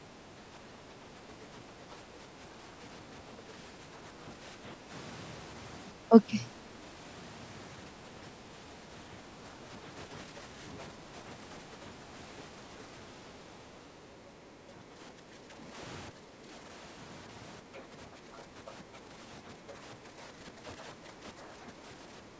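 Speech suppressed in double talk runs through the clip from 0.0 to 4.91 s, again at 5.93 to 6.13 s, and from 7.96 to 12.09 s. In each stretch the echo canceller likely could not tell the talker apart from loudspeaker echo while both sides spoke at once, so it turned everything down. The speech dips by a few decibels in scattered pieces that add up to about 1.5 s in the first stretch and about a second in the third.

From 12.82 to 14.49 s the other side's voice leaking through can be heard. The likely cause is echo cancellation leaving some of the far talker's loudspeaker playback in the microphone signal. It sits about 15 dB below the speech, a faint second voice under the main one.

The suppression returns more deeply from 14.65 to 16.68 s, with drops of about 10 dB over more than a second of speech. The likely cause is again the canceller clamping down during double talk.

From 17.62 s to the end the speech is held down by a few decibels again, for around three seconds in total. 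This is likely the same double-talk suppression. Within that stretch, at 17.74 to 18.72 s, the far voice leaks through once more, now only about 5 dB below the speech and plainly audible. That leak likely comes from the same incomplete echo removal.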